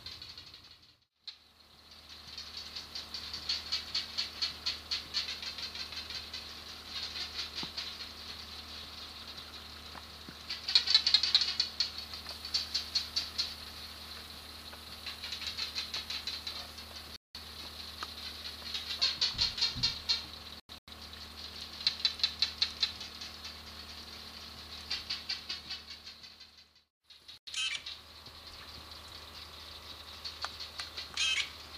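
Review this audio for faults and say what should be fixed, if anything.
Three corrupt frame muted gaps occur at 17.16–17.35 s, 20.54–20.88 s and 27.38–27.47 s. Flipped bits left compressed frames undecodable, so the player substituted digital silence for each rejected block. The holes begin abruptly, last about 0.19 s, 0.34 s and 0.09 s, and the sound resumes on schedule. Unlike a buffer underrun or a skip, nothing is delayed or lost from the timeline, and unlike packet-loss concealment the gap is true silence rather than a smeared fill. To prevent it, carry the stream over a checksummed, error-corrected transport or storage path so damaged frames are caught and resent before decoding.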